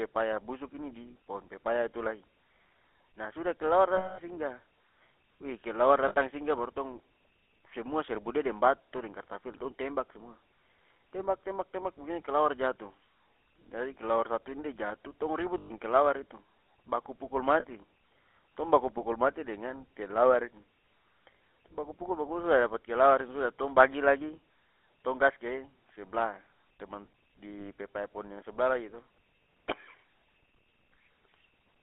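Speech heard through the GSM full-rate codec runs throughout, with a plainly audible buzzy, gravelly roughness, which fits the 13 kbps full-rate GSM codec. The codec rebuilds the voice from a vocal-tract model driven by a sparse, regularly spaced pulse excitation. That coarse excitation is what makes the voice rasp. On a spectrogram, energy sits in a telephone band of roughly 250 Hz to 3.4 kHz, with nothing above. Harmonics look smeared and grainy instead of cleanly striated. Lost GSM frames break in at 3.96–4.19 s (220 ms), 6.08–6.15 s (60 ms), 15.58–15.73 s (120 ms), 17.60–17.64 s (40 ms) and 27.58–27.68 s (40 ms). The longest gap fits about eleven 20 ms frames. In each gap the decoder keeps replaying the last good frame's settings, so the sound hangs as a rough, metallic ring instead of dropping out. On a spectrogram these spans show frozen, horizontally stretched bands.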